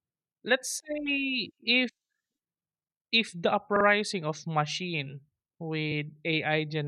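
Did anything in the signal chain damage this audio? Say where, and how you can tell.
Yes. Repeated frames at 0.70, 3.75 and 5.91 s: the codec stream replays a 43, 43 (twice) and 21 ms chunk, a stutter that lengthens the speech.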